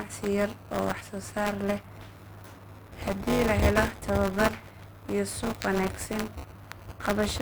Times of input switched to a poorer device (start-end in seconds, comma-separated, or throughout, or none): none